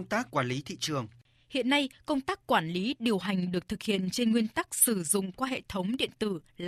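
From 3.25 s, just after "tác quản lý điều", to the end, the speech was split into windowed frames and overlap-added with windows that do not sum to a constant gain, causing overlap-add ripple: the level dips about 6 dB around 20 times a second, giving a rough, fast flutter.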